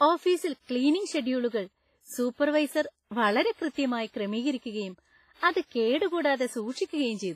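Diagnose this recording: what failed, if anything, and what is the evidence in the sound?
Throughout, the speech rings and washes, with hiss breathing alongside and nothing above 15.5 kHz, likely from heavy codec-stage WMA compression at a low bitrate of about 24 kbps.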